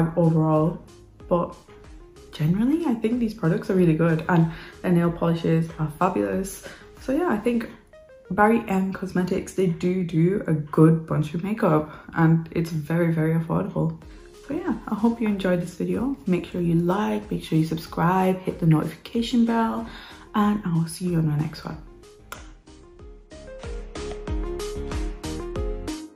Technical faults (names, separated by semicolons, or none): adaptive stream at a lower bitrate